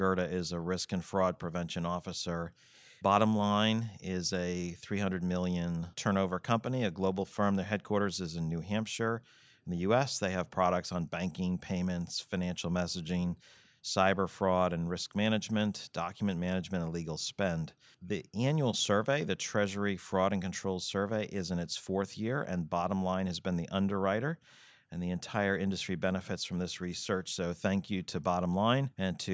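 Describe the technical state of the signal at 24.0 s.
At 24.0 s the signal is intact, with no fault present, only the ordinary call microphone processing trimming the lowest bass and leaving nothing above 8 kHz.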